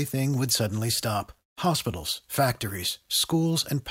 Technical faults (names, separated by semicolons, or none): none